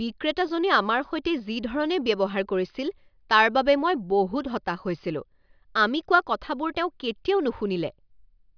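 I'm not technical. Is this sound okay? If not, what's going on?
Yes, this recording sounds fine; nothing is wrong.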